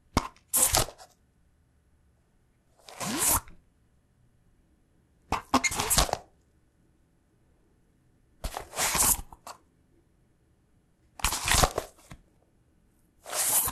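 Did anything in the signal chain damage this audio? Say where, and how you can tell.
No, nothing in the sound stood out on listening as damage from any stage of the signal chain.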